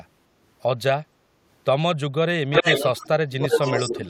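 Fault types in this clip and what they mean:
Background gated by the echo canceller: from 1.16 to 1.4 s the room sound behind the speech sinks by about 6 dB for roughly a fifth of a second, as the canceller pulls the microphone down while the far-end loudspeaker plays, then recovers once it releases.
Echo leak: a delayed copy of the speech arrives 303 ms late, from 2.52 to 3.08 s and again from 3.39 to 3.94 s. It sits somewhat above the direct speech at first and about level with it the second time, likely residual loudspeaker pickup the canceller failed to remove.
Speech suppressed in double talk: the speech ducks sharply, roughly 20 dB over about 150 ms between 3.13 and 3.41 s, then around 10 dB for about a tenth of a second from 3.89 to 4.08 s, likely the canceller attenuating everything while both ends talk at once.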